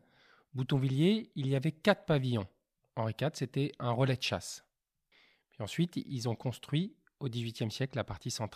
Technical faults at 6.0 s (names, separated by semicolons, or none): none